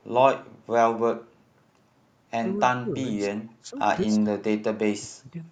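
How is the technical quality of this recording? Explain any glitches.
The recording has two kinds of call-processing glitch in the second half.

Speech suppressed in double talk appears at 2.81 to 2.99 s, 3.6 to 3.75 s and 4.05 to 5.36 s. The echo canceller likely treated overlapping talk as echo, so the speech dips by roughly 15 dB, then 20 dB, then about 30 dB in the final stretch.

An echo leak follows at 3.4 s, likely from a loudspeaker echo the canceller missed. A faint copy of the speech returns about 180 ms late, far below the main level.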